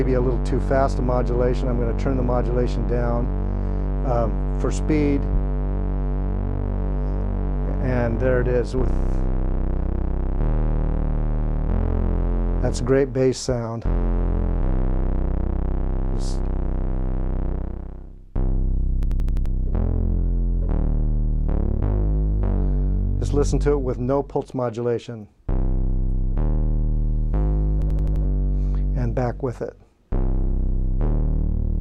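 At 19.03 s and again at 27.82 s, a system hang loop takes over for about 0.43 s. Each time the system stalled while the sound hardware kept replaying one 85.33 ms slice, which fits a 4096-sample buffer, five times at 11.7 Hz. The result is a rapid machine-gun stutter, and close to half a second of audio is lost. A waveform shows five identical copies side by side, and a spectrogram shows the same pattern stamped repeatedly with hard vertical seams.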